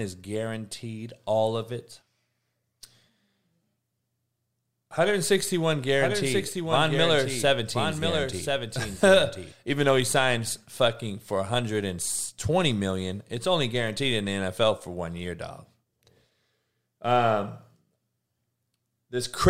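From 5.96 to 9.52 s a doubled audio track plays: a full-band copy runs about a second behind and a few dB quieter, likely from a second capture path or an out-of-step edit. Unlike an echo, it cuts in and out abruptly without decay.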